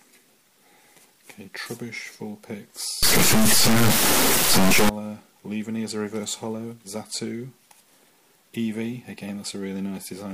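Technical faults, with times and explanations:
3.03 to 4.89 s, integer read as float: for this stretch the sample data gets interpreted with the wrong format, which fits 32-bit integer samples being read as 32-bit float. The bit patterns then decode to values that are either almost nothing or wildly out of range, so the signal slams between silence and the clipping limit. That's why it turns into an extremely loud, buzzing square-wave sound instead of the actual audio.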